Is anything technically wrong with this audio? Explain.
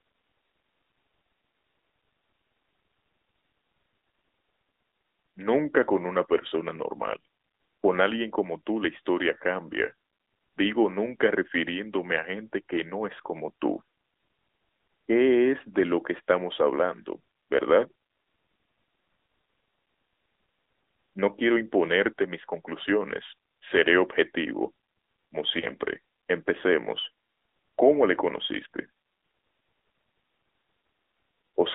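Yes. Throughout, the speech sounds boxed in and plainly buzzy: there is nothing below about 300 Hz or above 3.7 kHz, and consonants and vowels take on a clearly synthetic, grainy edge. This is the AMR narrowband mobile codec, at a rate consistent with 10.2 kbps. It samples at 8 kHz and rebuilds each 20 ms frame from a vocal-tract model excited by a handful of pulses, so the top of the spectrum is gone and the fine texture is lost.

There are also lost AMR speech frames, heard as two brief dips with a small warble, from 6.48 to 6.51 s and from 25.60 to 25.66 s. Each sounds like one missing 20 ms frame. When a frame fails its checksum, the decoder repeats the previous pitch and vocal-tract settings at a lower gain. That produces the short smeared sag, after which the speech returns slightly rough for an instant.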